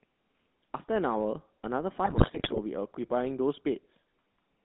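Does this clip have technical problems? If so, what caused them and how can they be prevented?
Yes. Throughout the speech the voice has a buzzy, gravelly roughness and a thin, boxed-in tone, with nothing below about 200 Hz or above about 3.5 kHz. This is the GSM full-rate codec. It models the vocal tract as a filter and feeds it a coarse pulse excitation that keeps only every third sample, and the result fits the 13 kbps GSM full-rate codec. To prevent it, carry the call over a wideband codec such as AMR-WB or EVS.

From 2.04 to 2.59 s the speech breaks into squawks, pops and gargling bursts, with sudden jumps in level. These are GSM bit errors. Corrupted bits reached the decoder and scrambled the filter, pitch and gain values frame by frame, so the spectrum warped and the level spiked. The damage, spread over about half a second, points to a weak radio link with an error rate of several percent, hitting around 27 frames in a row. 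Better signal strength prevents it, as does a network using stronger error protection.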